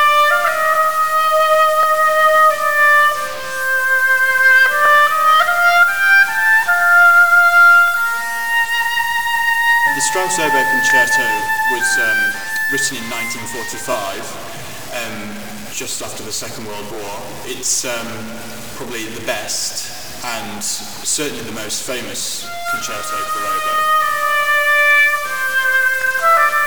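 Distortion runs through the whole clip, with a noise floor that fills the pauses, likely from a stuck bit holding one data bit fixed regardless of the waveform. A short stutter, a 23 ms slice heard twice, recurs at 1.83–1.86, 4.86–4.88, 7.88–7.90, 10.90–10.92, 13.92–13.95, 16.95–16.97, 22.99–23.02 and 26.02–26.04 s. These are overlapping chunks: the audio was handled in 3 s blocks, each starting before the previous one ended.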